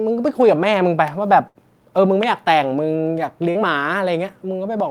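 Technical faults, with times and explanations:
1.47 to 1.58 s, burst of packet loss: about 80 ms of audio never arrived, so the receiver extended the last sound for 72 ms while fading it, then jumped ahead. A spectrogram shows the last sound frozen and dimming, then an abrupt restart, and the waveform shows the held sound shrinking.
3.51 to 3.58 s, short concealed packet loss: a 40 ms hole was patched by continuing the preceding sound for 41 ms, then blended back, heard as a brief smear. A spectrogram shows a short blurred strip, and the waveform a slightly uneven splice.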